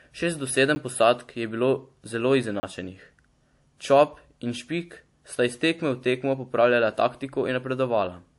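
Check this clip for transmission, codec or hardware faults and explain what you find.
Two faults are audible in this speech: a layered codec sound throughout, and two brief blocks of digital silence.

Throughout the clip, nothing is heard above 11.3 kHz, and two distinct kinds of artefact sit together. The likely cause is transcoding between lossy codecs, consistent with a WMA encode later re-encoded to MP3 at a low rate near 48 kbit/s. The second encoder spends bits reproducing the first one's damage and adds its own. The mixture of two artefact characters, rather than one consistent kind, sets this apart from a single low-bitrate encode.

At 0.75 s and from 2.60 to 2.63 s, the sound drops abruptly to silence, likely because an output buffer was not filled in time. The 10 ms gap is heard as a tick, and the 30 ms gap as a short hole. The hard, unfaded edges distinguish this from a smoothed dropout or concealed packet loss.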